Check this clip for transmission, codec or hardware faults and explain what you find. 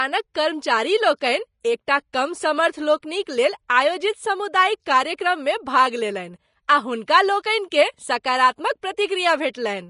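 Two codec faults are present. Throughout, the speech is hissy and grainy with no content above 10.5 kHz, likely Vorbis compression at a rate fitting roughly 33 kbps, with the treble quantised coarsely into noise. Pre-echo occurs at 3.69, 6.68 and 7.70 s: block quantisation noise spreads 11 to 17 ms ahead of sharp attacks, giving a brief hiss and a smeared onset.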